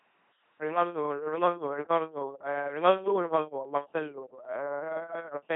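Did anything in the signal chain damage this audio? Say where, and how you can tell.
Yes. The codec stage damaged the entire speech clip: an LPC-10 vocoder. A buzzy, mechanical robot quality persists throughout, with nothing above 3.9 kHz, consistent with a 2.4 kbit/s encoder. Unlike plain band-limiting, each moment is driven as either pulse buzz or noise, so voicing errors surface as buzz or hiss.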